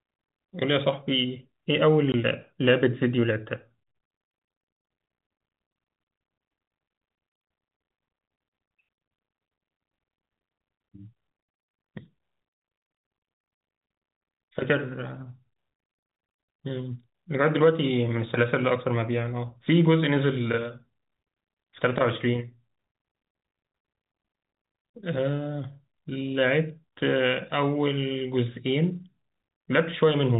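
The speech drops out abruptly three times: a brief gap at 2.12 s, another at 9.16 s, and a longer hole from 12.98 to 13.04 s. Each gap has hard edges. This is packet loss filled with silence. Audio went missing in transit, and the receiver played nothing in its place. The first two gaps last 20 ms and the third 60 ms, which points to one and then three lost 20 ms packets. The band-limited telephone sound of the G.711 coding remains audible around the gaps.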